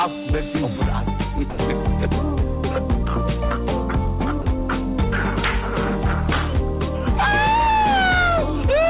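At 1.5 s for 80 ms and again at 4.42 s for 40 ms, the sound gives way to steady comfort noise, likely sound dropped by the voice detector.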